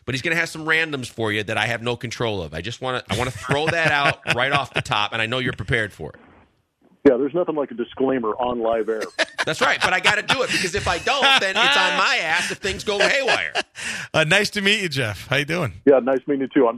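Short bursts of noise blips break over the sound from 8.32 to 8.74 s, then return more briefly from 11.54 to 11.74 s. This is DAB burbling. Weak reception let bit errors, on the order of a fraction of a percent, slip past the error correction into the MP2 audio data. Corrupted samples put short blips of noise into individual sub-bands.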